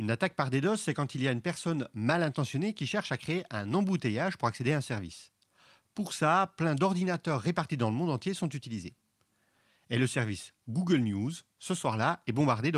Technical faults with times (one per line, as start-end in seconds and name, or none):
none